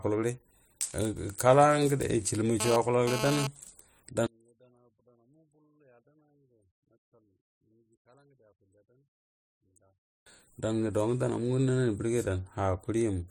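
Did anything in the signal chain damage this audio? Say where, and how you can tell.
Yes, two problems. From 2.60 to 3.47 s there's a GSM phone buzz, a 217 Hz burst pattern with a stack of harmonics sitting about 6 dB below the speech and having nothing to do with it. That's the analogue wiring picking it up: a 2G handset nearby was transmitting, and some stage in the audio circuit rectified its radio pulses into the audio band. The buzz comes and goes rather than holding steady, which fits a phone moving data, not a call.

Then from 4.26 to 10.26 s the whole signal, background included, falls by about 37 dB, leaving only a faint residue before it comes back. That collapse of everything at once points to one channel inverted, most likely a polarity reversal in the analogue wiring on one leg of a stereo feed. When the two channels were summed to mono, the common content cancelled, and what you hear is just the small difference between them.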